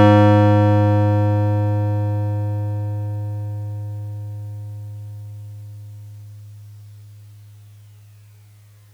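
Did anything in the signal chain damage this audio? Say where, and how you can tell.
No, nothing in the chain damaged this music.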